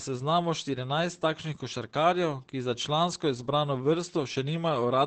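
From start to finish the speech sounds muffled and hoarse, with nothing above about 8.7 kHz, so sibilants lose their edge. This is likely heavy Opus compression. The narrowed bandwidth and husky texture fit the codec's speech-oriented SILK mode at a very low rate, around 12 kbps, where the encoder models the voice coarsely and drops the upper band entirely.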